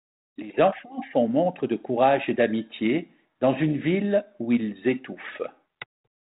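Nothing's technically wrong with this speech clip; it's simply carried over G.726 ADPCM at 32 kbit/s, the usual cordless-phone rate, so it has that telephone bandwidth topping out around 4 kHz and only the light coding texture you'd expect from that path.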